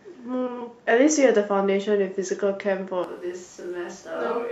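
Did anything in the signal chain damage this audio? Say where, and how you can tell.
Yes. From 3.04 s to the end of the speech clip, the sound abruptly turns roomy and hollow, loses bass, drops about 5 dB and carries room noise sitting around 25 dB below the speech. That sudden change points to a switch to a distant microphone, likely at the capture stage where the close mic's feed dropped out. Unlike a reverb or EQ effect in call processing, the change is instantaneous and brings a higher noise floor with it, which fits a different pickup rather than added processing.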